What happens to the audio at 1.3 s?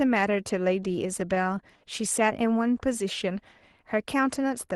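At 1.3 s the clip is inside a run of repeated stalls (stutter), from 0.83 to 1.58 s. Packets arrived late, so the jitter buffer kept running dry and the receiver stretched the last sound across seven brief gaps, none longer than 11 ms. Nothing is lost, but the speech drags and stutters.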